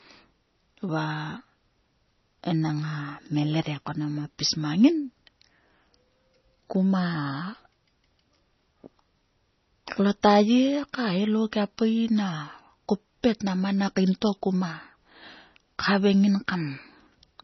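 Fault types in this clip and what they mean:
MP3 compression: The speech has nothing above 6 kHz, and the damage is heavy: the upper band sounds watery and swirling, s sounds turn into metallic chirps, and consonant onsets smear. The likely cause is an MP3 encoder starved of bits, which fits a bitrate of about 24 kbps, so it cuts the treble at a fixed point and lets weak frequency lines flicker on and off between frames. A plain low-pass filter would dull the sound without the swirl or chirping.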